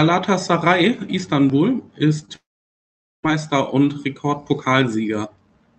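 Right around 2.19 s and again at 2.25 s there's short concealed packet loss: two separate bursts of about 20 ms each that didn't reach the decoder in time. The receiver papered over each gap by extending the sound just before it and then crossfading back into the real audio, so you get a quick smear or wobble rather than a clean hole. The top end stops near 8 kHz, as you'd expect from an Opus call link.

Then from 2.36 s to 3.25 s the signal just goes away, most likely a long network dropout. Nearly 0.9 s of audio never turned up. The concealment only manages a brief buzzy continuation of the last sound that fades within a few hundredths of a second, leaving roughly 0.8 s of dead silence. The audio comes back at 3.25 s with that stretch simply gone rather than delayed.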